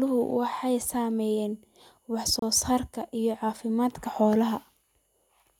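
From 2.39 to 2.42 s there's a gap between stream segments: the timestamps don't meet, so the player fills 29 ms with hard-edged silence, though no audio is lost.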